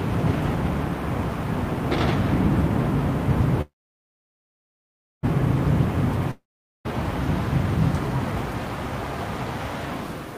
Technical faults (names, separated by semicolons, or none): call audio freeze; long network dropout